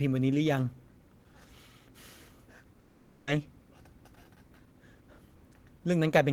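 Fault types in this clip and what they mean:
Long network dropout: from 2.79 to 3.29 s the speech breaks off, and for about half a second a buzzy continuation of the last sound fills the gap, fading without ever reaching silence. This likely comes from a stretch of audio that never arrived, with the receiver stretching its final fragment to cover the hole. When the speech resumes at 3.29 s, the roughly 480 ms it skipped over is simply gone.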